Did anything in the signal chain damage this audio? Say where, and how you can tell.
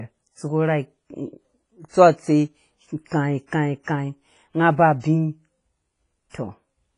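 Yes. The damage sits at the codec stage and runs through the whole speech clip. Nothing is left above 10.5 kHz, and the top end stops like a wall. The speech rings and sounds washy. A hiss rises and falls with the speech. This is likely WMA compression. Long transform blocks smear quantisation noise across tens of milliseconds. Weak spectral lines are zeroed outright. The heavy damage fits a low bitrate, around 24 kbps.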